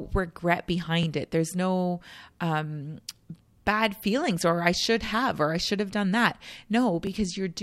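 At 1.03, 3.04, 5.06 and 7.07 s the speech has overlapping chunks: the audio was handled in 2-second blocks, each starting about 13 ms before the previous one ended, so that sliver plays twice. Each join is heard as a click or stutter, for example between "no um" and "bad feelings or I". On a waveform a short segment repeats with a discontinuity at the seam, and on a spectrogram a thin vertical broadband line appears every 2 s.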